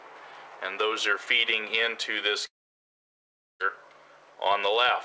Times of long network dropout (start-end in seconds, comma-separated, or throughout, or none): 2.46-3.62